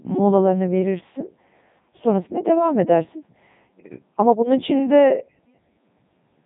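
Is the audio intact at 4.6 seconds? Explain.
No. At 4.6 seconds, as through the whole clip, the speech has passed through the Codec 2 vocoder, and the heavy damage is consistent with its 3.2 kbit/s mode. Only pitch, voicing, energy and a coarse spectral envelope survive; the decoder rebuilds the voice from sine waves, so the original waveform is gone. The speech sounds robotic and buzzy, with nothing above 3.8 kHz.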